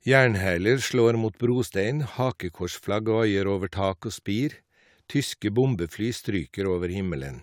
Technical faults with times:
none

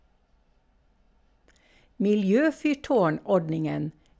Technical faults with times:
none

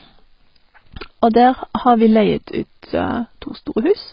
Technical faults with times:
0.00-4.12 AAC compression

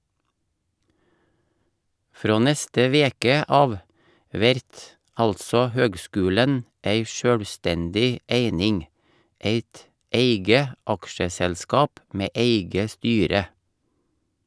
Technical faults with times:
none

